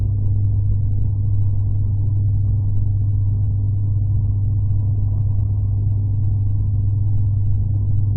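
No technical faults are audible.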